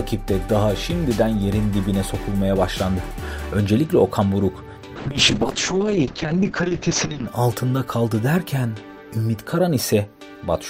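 A call bitrate drop hits from 4.96 to 7.33 s: the encoder falls from 128 to 7 kbps, the top end shrinks from 20 kHz to 8 kHz, and the sound goes coarse and muffled.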